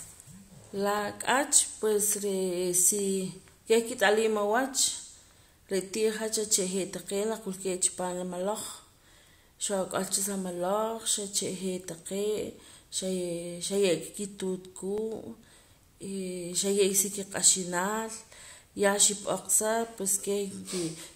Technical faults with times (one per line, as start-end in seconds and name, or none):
0.99-20.99 periodic USB or driver dropouts